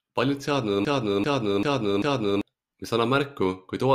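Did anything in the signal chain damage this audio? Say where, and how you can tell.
Yes. From 0.85 to 2.41 s the speech stutters on one fragment about 0.39 s long, which repeats exactly four times back to back before normal audio resumes. This is a broken-record loop, likely a stalled player or stream buffer resending its last fragment while the intervening audio is lost.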